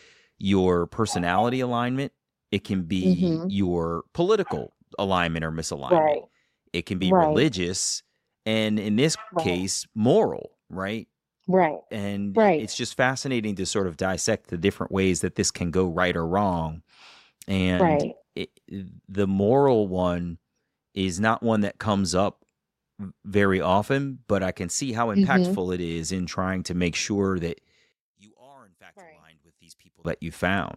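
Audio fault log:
27.92–30.05 s, one channel inverted: right after "to make sure that" the speech falls by about 28 dB to a faint residue, likely because one stereo channel has reversed polarity, so the centred voice cancels almost completely when both channels sum to mono.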